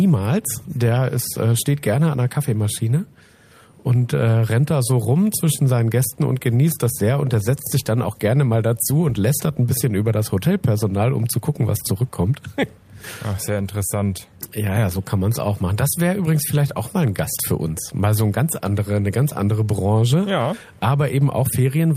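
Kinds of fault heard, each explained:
No faults can be heard in this clip. There is nothing to list under any kind.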